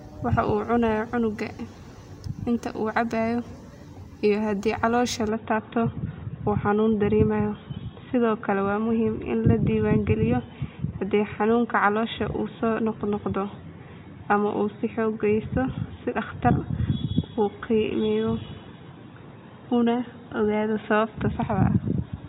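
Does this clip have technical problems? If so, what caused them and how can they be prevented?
Yes. From 5.29 s to the end, the speech turns dull and boxy, losing everything above 3.8 kHz and gaining a faint new background noise, with no gap at the change. The likely cause is the input switched to a poorer device. Locking the recording input prevents it.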